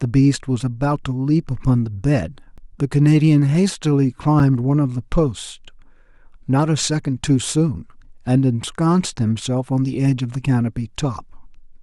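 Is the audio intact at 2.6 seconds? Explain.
No. At 2.57 s there's a block of digital silence: about 12 ms of silence, fitting an unfilled 512-sample buffer, heard as a sharp tick because hard edges replace any fade.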